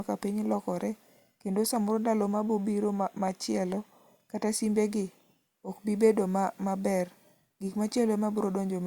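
No technical faults are audible anywhere in this speech.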